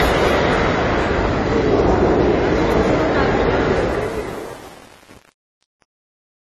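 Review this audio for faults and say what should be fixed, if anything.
Throughout the clip, nothing is present above about 13 kHz, and the audio is dull and smeared with a warbling, fizzy texture. This is likely AAC compression at a low bitrate, around 32 kbps. The hearing-model quantisation of each frame's frequency lines leaves holes and substitute noise. A plain low-pass filter would dull the sound without that shifting texture. Encode at a higher bitrate or keep an uncompressed master.

From 3.76 s to the end, the fade-out that starts at 3.76 s and ends at 6.43 s turns gritty, and it is worst from 3.79 s onward. This is truncation distortion on a fade. An undithered stage, which fits 8 bits, collapses the falling waveform into a few square steps, so the quiet tail sounds gritty. A noise gate would cut off cleanly instead of adding grit that follows the level. Apply fades at high resolution and dither before reducing bit depth.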